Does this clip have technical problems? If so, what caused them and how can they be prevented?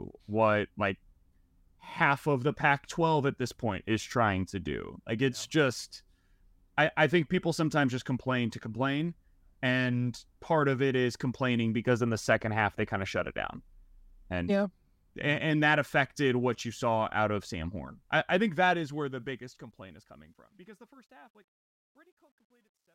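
Yes. The clip has truncation distortion on a fade from 18.37 s to the end at 22.94 s. The level steps are coarse enough to suggest an 11-bit word length with no dither. As the speech gets quieter the waveform collapses into a few square steps, and from 20.48 s onward the tail sounds gritty. To prevent it, apply the fade at 24-bit or floating-point resolution and add dither when reducing word length.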